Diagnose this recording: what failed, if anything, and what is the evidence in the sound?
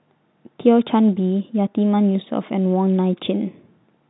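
No fault in this recording.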